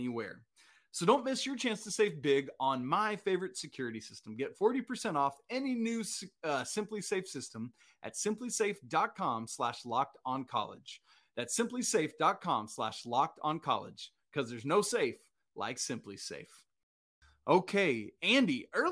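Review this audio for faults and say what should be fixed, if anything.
No faults heard; nothing here needs fixing.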